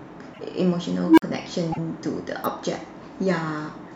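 At 0.33 to 0.40 s the speech jumps ahead, with a disturbance lasting about two to three frames of a coded stream. This is likely a broken MP3 bit reservoir. Frames were dropped, so the frames that followed reached back for borrowed data and decoded bytes from the wrong frame. The span fits frames of about 26 ms.

From 1.04 to 1.22 s an unstable filter takes over. A low tone around 300 Hz swells over roughly 130 ms until it clips. The output then collapses into about 46 ms of silence while the filter resets. A recursive filter with bad coefficients fed back on itself without limit. The steady rise in loudness before the cut is what separates this from a codec glitch, which doesn't build up this way.

At 1.71 to 1.78 s the same skip returns. Again this is likely a broken bit reservoir, with the same fractured-frame signature as before.

At 2.44 s a sharp snap sits on top of the speech, an electrical switching spike probably picked up from a nearby switch or discharge. 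Unlike the reservoir faults, nothing is lost or skipped. The arc is simply added over the sound, and it is far shorter than either of the other faults.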